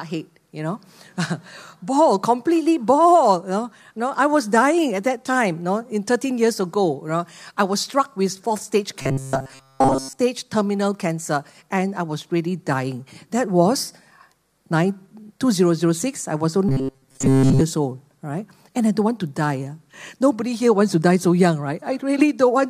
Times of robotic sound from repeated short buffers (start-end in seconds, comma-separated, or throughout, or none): 9.02-10.19, 16.69-17.61